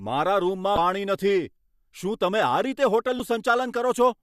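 At 0.75 to 0.78 s, and again at 3.17 to 3.20 s, there's a quick glitch in the speech. That's damaged data in the compressed stream: the decoder hits corrupted bytes, misreads those frames and loses sync until it finds the next frame header.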